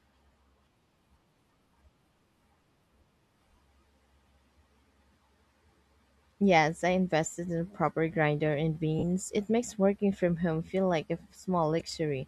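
Lost LE Audio frames left the LC3 decoder repeating its last spectrum with scrambled signs, turning the speech into a brief noisy smear: 20 ms at 0.33 s, 40 ms from 8.99 to 9.03 s after "proper grinder and", and 10 ms at 11.80 s.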